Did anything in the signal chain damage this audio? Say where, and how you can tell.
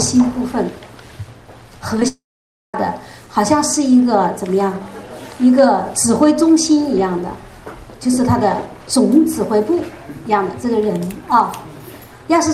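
Yes, the network stage. Three short concealed packet losses land at 1.97, 2.00 and 2.03 s, each about 10 ms of missing audio. The receiver papered over each gap by extending the last sound and blending back, so you get quick smears.

Right after, from 2.08 to 2.75 s, there's a long network dropout: the concealment stretches the last sound out briefly, then about 530 ms of the gap goes silent before audio resumes with roughly 660 ms lost, likely from a burst of packets never arriving.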